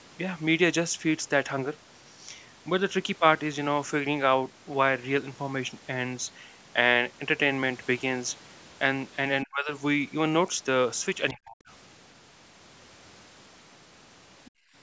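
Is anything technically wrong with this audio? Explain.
Yes, the speech has three kinds of echo-canceller fault, all near the end.

Speech suppressed in double talk, at 9.44–9.73 s and 11.32–11.69 s: the speech sinks by roughly 35–40 dB, likely because the canceller ducked the microphone while both sides talked. This shows as sudden waveform hollows and blanked spectrogram bands.

The other side's voice leaking through, at 14.45–14.51 s: a faint second voice, about 30 dB under the speech, likely uncancelled loudspeaker echo. It appears as a brief, weak spectrogram smear.

Background gated by the echo canceller, at 14.51–14.75 s: the room sound drops by about 28 dB as the microphone is pulled down, then recovers. On the waveform this is a near-flat gap in the noise floor.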